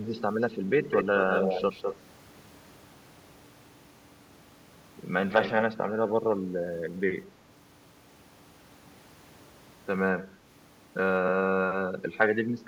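From 0.82 to 1.96 s, and again from 5.29 to 5.63 s, a second copy of the speech trails the original by about 204 ms, only a little quieter than it. This is an echo leak, likely from a far-end loudspeaker whose echo canceller let its microphone pick-up through and send it back. Unlike room reverberation, which smears the sound continuously, this is a distinct, delayed repeat that comes and goes in separate stretches.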